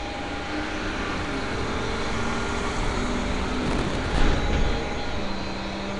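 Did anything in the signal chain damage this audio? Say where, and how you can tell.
Yes. Throughout, the sound carries a rough, hissy, smeared texture with nothing above 10.6 kHz, likely Nellymoser compression at the codec stage. Block coding with too few bits leaves weak bands empty and filled with noise, which fits a rate around 44 kbps.

Processor overload crackle, driver or buffer stage, runs from 3.62 to 4.20 s as a gritty tearing burst. Dozens of buffers of around 5 ms repeatedly missed their deadlines, and each gap was filled with hard-edged old audio, producing the crackle.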